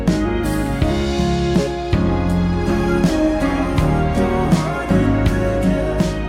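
A few samples were likely dropped from the stream at two points, 2.54 s and 4.68 s, each gap amounting to a tiny fraction of a millisecond. At each point the waveform jumps straight from one value to a later one instead of moving smoothly between them. Nothing audible is removed, but each jump produces a single sharp click, seen as a thin vertical line running across the spectrum at that instant.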